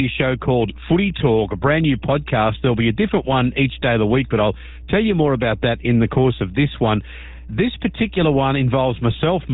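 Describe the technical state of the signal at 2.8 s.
At 2.8 s you're hearing steady 60 Hz mains hum, present throughout and roughly 20 dB under the speech, likely from a ground loop bleeding the power line in.

The GSM full-rate codec also runs the whole way: pulse-driven vocal-tract modelling leaves plainly gravelly, buzzy speech with nothing above 3.8 kHz, which fits a 13 kbps encode.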